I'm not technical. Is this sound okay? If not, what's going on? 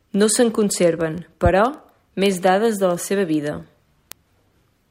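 No. From 0.14 s to 4.89 s there are word clock ticks: fast little clicks, roughly 25 per second, behind the speech. Two digital devices are running on separate clocks. Each time they drift apart, a single sample gets skipped or doubled, making a tick.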